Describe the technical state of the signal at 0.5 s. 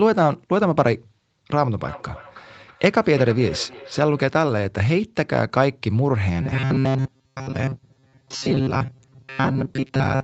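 At 0.5 s the speech is intact, with no fault; it carries the ordinary band limit of a call, nothing above about 8 kHz, from the microphone processing and the Opus call path.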